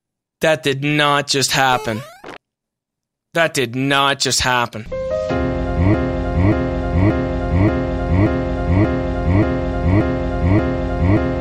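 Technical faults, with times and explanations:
5.94 s to the end, broken-record loop. A fragment of about 0.58 s starts repeating exactly, back to back, with no gap between copies. It plays nine times and is still cycling when the clip ends. Any new audio that should have followed 5.94 s never arrives. The likely cause is a stalled player, encoder or stream that kept resending the last piece it held. That steady repeat gives the stuck, stuttering rhythm.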